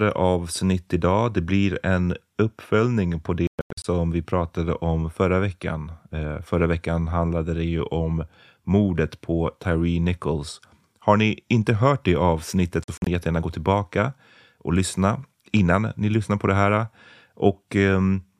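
At 3.47–3.85 s, after "blir en uppföljning på", the speech breaks into choppy gaps totalling 279 ms, longest 116 ms. Again at 12.84–13.07 s, before "jättegärna gå tillbaka och", 116 ms drop out. Each resumes as if it had kept playing, likely a Bluetooth dropout.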